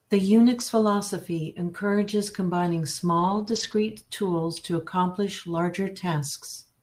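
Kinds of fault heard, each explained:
Lost packet rebuilt from error correction: at 2.07 s and from 3.19 to 3.73 s, just before "tools to accomplish", the speech turns rougher and noisier without any gap, because the decoder played the low-bitrate backup copy carried in each following packet instead of the lost originals.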